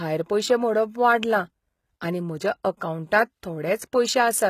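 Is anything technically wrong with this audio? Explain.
Yes. Throughout the speech there is plainly audible codec damage, most likely from HE-AAC compression, consistent with a very low bitrate around 20 kbps. The codec keeps only the lower spectrum and synthesises the treble by copying lower bands upward under a coarse envelope, so the upper harmonics do not line up with the real ones. The top end sounds artificial, with s sounds turning gritty or lispy, and nothing is present above 14.9 kHz.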